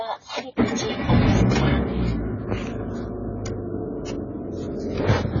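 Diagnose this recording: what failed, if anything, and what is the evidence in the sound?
Codec stage, throughout the clip: nothing above 7 kHz and heavy damage leave the sound dull, smeared and warbling. A spectrogram shows a hard ceiling at 7 kHz with patchy, blotchy bands beneath. This is likely AAC compression, AAC-LC starved at a bitrate near 16 kbps.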